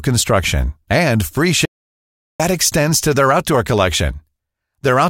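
A speech clip with one clear audio dropout to silence. Right after "and free" at 1.65 s the signal vanishes completely, with no room tone at all, and it returns at 2.40 s on "extends to their outdoor". That's about 0.74 s of pure silence, so whatever was said in that stretch is simply gone. It's likely the input got cut for a moment, maybe a loose connection or a brief mute, while the recorder kept writing.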